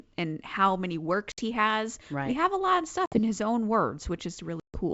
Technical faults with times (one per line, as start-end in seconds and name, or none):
1.32-1.40 packet loss on an ADPCM call
3.06-3.19 packet loss on an ADPCM call
4.60-4.80 packet loss on an ADPCM call